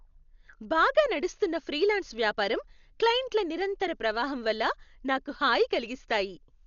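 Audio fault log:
Throughout, Dolby Digital compression: the speech sounds dull and heavily damaged, with nothing above about 6.9 kHz and a rough, fluttering noise around its tones. The likely cause is a low-bitrate encode near 48 kbps. It narrowed the band and left many frequency lines to dither noise.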